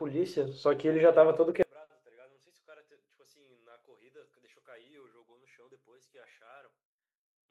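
A speech recording that, from 1.63 s to the end at 7.50 s, collapses to a faint remnant about 33 dB quieter, with the centred voice and low end almost gone. The likely cause is one channel inverted in polarity, cancelling the shared content when summed to mono.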